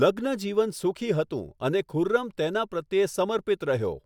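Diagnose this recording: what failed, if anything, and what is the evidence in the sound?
Nothing failed; no fault is audible anywhere in this recording.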